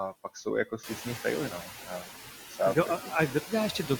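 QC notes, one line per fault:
Throughout: noise suppressor artifacts. The background sinks by about 10 dB between phrases and rises under them as the suppressor pulls steady-noise bands down frame by frame. This is clearest after the room noise rises near 1 s.
0.65–1.2 s, 1.5–2.31 s, 3.01–3.12 s, 3.3–3.53 s: speech cut by the noise suppressor. Soft parts sound swallowed, dropping as much as about 19 dB just before "třeba a", because the suppressor mistook quiet speech for noise.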